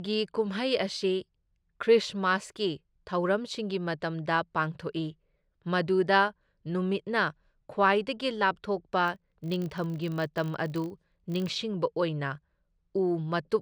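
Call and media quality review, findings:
Regular 50 Hz buzz tracking speech level, 9.06–11.51 s. Filter restarted on every block: state cleared, each block starts from silence with a tick; the rate fits 20 ms blocks.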